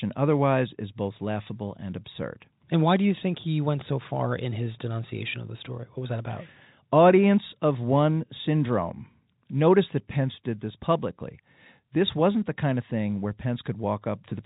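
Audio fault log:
No faults can be heard anywhere in this speech. The G.711 telephone coding path shows in a band that stops at 3.8 kHz, with at most a faint grain that rises and falls with the level.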